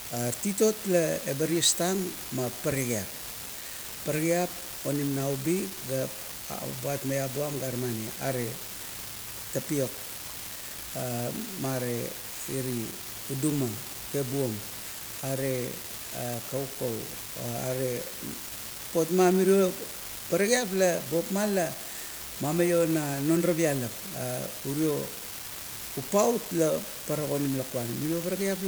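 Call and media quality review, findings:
Unreliable data bit, present throughout, pauses included. Steady crackle/fizz under the speech, not tied to level or content. Probable component: marginal data line between converter and digital path. Mechanism: one bit intermittently wrong in a random share of samples, each error adding an identical spike, about -26 dBFS. Constant step size gives uniform fizz texture. Audible in silent gaps, where no signal masks it.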